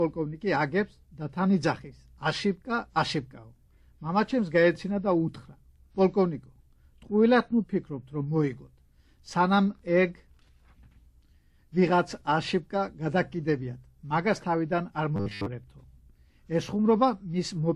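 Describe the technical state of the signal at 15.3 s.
At 15.3 s the signal shows robotic sound from repeated short buffers, running from 15.16 to 15.47 s. A rigid, metallic buzz at 100 Hz sits on the audio, which still follows its rough contour. The likely cause is audio arriving too seldom, so roughly 10 ms chunks are replayed in place of most of the real signal. Unlike dropouts, this leaves no silences, just a steady, fixed-pitch drone.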